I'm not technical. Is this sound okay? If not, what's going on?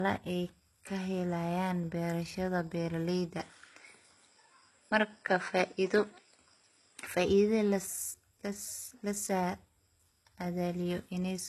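No. From start to finish the speech sounds dull and smeared, with nothing above about 12 kHz, which suggests low-bitrate audio saved at a high bitrate: a large file that likely still carries damage from an earlier, small one.

Separately, from 3.40 to 7.07 s, right after "ay kahelayaan berashada beraleyda", the sound turns duller still, the level shifts, and faint new background noise appears, with no gap at either change. This points to an input switched to a poorer device. Unlike the constant dullness, it starts and stops at clear moments.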